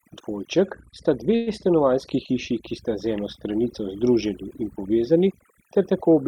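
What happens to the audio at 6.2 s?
At 6.2 s the speech still carries overdone noise removal, present throughout the clip. The noise reduction is set far too strong. It pushes individual frequency bands down whenever they sit near its noise estimate, taking quiet speech detail with them. The background drops and breaks up into twinkling, warbling specks.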